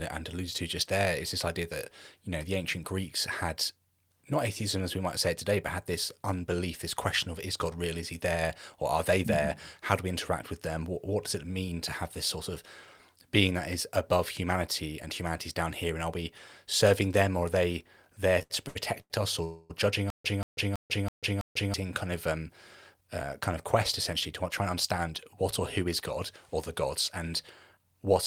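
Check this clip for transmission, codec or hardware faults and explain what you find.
Yes, network-related faults cluster between about 18 and 26 seconds of the speech.

Repeated stalls (stutter), 18.39 to 19.12 s: late packets emptied the jitter buffer four times, and the receiver stretched the last sound across the gaps. The longest gap is 88 ms, and about a third of that span is filled in, so the speech drags but nothing is lost.

Call audio freeze, 19.44 to 19.72 s: likely packets held up in transit. The last sound is extended for 256 ms without dropping to silence, and the speech then resumes where it stopped.

Stutter with silent gaps, 20.10 to 21.74 s: a 185 ms burst plays five times, with 143 ms of silence between repeats and a 327 ms cycle. This likely comes from a stalled stream replaying its last fragment, and the audio meant for that time is lost.

Jitter buffer speed-up, at 22.03 to 22.51 s (109%), 22.94 to 23.65 s (107%) and 24.61 to 25.88 s (106%): an overfull buffer was drained by cutting short pitch-period pieces. 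The speech runs hurried at an unchanged pitch.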